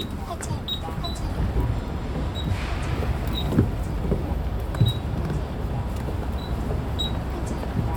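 Nothing technical stands out in this recording of sounds; there are no faults to point to anywhere in it.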